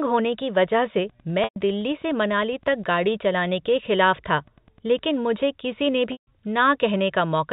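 From 1.01 s to 5.08 s, just after "होने की वजह" and running up to "मुझे किसीने", a nearby Wi-Fi radio couples into the audio circuit, which rectifies its transmissions. This Wi-Fi interference is a steady tick every 102.4 ms, about ten per second, sitting well below the speech.

At 1.44 s, packet loss with pitch repetition removes 120 ms of audio. The receiver fills the gap by repeating the last pitch period and fading it down, so the voice briefly holds on a buzzy, sustained tone before returning. That length fits about four lost packets.

A second, longer loss follows at 6.12 s, right after "मुझे किसीने", and lasts 150 ms, which fits about five packets. The repeated pitch period fades out and the speech returns with a short cross-fade, all within the 4 kHz band of the G.711 telephone line.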